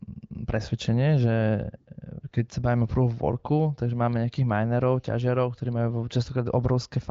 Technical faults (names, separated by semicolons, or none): none